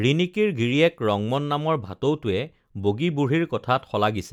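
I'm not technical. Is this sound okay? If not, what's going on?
Yes, nothing in this recording points to a technical problem with the signal itself.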